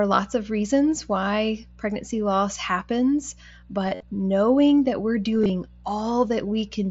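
A speech recording over a Bluetooth headset link, carrying mains hum for its whole length: a steady 60 Hz tone with low harmonics, roughly 25 dB below the speech, which points to a ground loop or nearby transformer coupling the power line into the signal. Concealed Bluetooth headset packet loss occurs twice. From 3.86 to 4.03 s, about 90 ms of audio is missing across 165 ms, with the longest gap 52.5 ms. This gap is long enough that the receiver's repeated short waveform stretches sound like a buzzy held tone before a slight warble. From 5.39 to 5.50 s, 82.5 ms is lost across 150 ms in shorter gaps of up to 22.5 ms. Beneath this, the mSBC wideband codec adds only light graininess.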